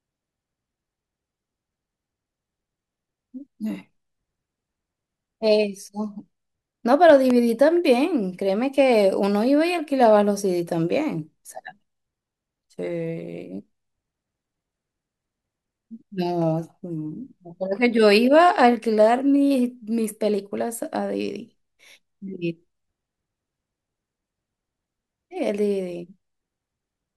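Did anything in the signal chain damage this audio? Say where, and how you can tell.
Yes. A loud pop, actually two in quick succession, lands between 7.10 and 7.33 s, peaking about 10 dB above the speech, which continues uninterrupted underneath. The likely source is the analogue wiring stage, a plug, switch or static discharge injecting a voltage step that downstream circuits then shape into a thump. On a waveform you'd see two sharp spikes towering over the speech; on a spectrogram, two bright vertical broadband stripes spanning the full frequency range.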